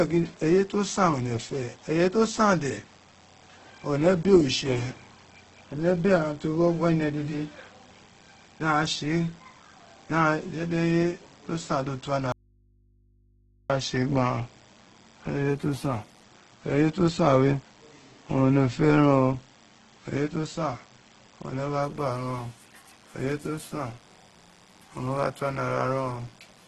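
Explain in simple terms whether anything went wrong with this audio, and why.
A thin, steady buzz sits underneath the speech from start to finish, quietly. That is DECT cordless phone buzz. A cordless phone or its base station nearby sends short radio bursts 100 times a second, and the recording electronics pick them up and turn them into sound. The result is a low, even hum at 100 Hz, edged with a rasp from its many harmonics.

The speech itself sounds grainy and rough throughout, with a heavily noisy, gritty texture, and nothing is heard above 12 kHz, so it lacks some crispness. This is likely Opus compression, squeezed hard to save space. When the encoder runs short of data, it fills in parts of the sound with approximations or noise instead of leaving gaps. That keeps the overall tone but roughens the detail, especially on steady sounds.

From 12.32 s to 13.70 s the speech vanishes abruptly for about 1.4 seconds, leaving only a faint hum, then snaps back mid-flow. 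This is an audio dropout to a faint residue. It doesn't fade like a natural pause. The sound simply cuts out, most likely because the signal was briefly lost somewhere along its path. The equipment after the break kept running and passed on only its own background hum.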